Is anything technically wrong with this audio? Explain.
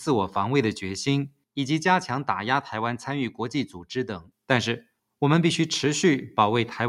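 Yes. From 1.29 to 1.57 s, the noise suppressor misjudged the sound as noise and attenuated it by up to about 19 dB, so roughly 150 ms sinks in level.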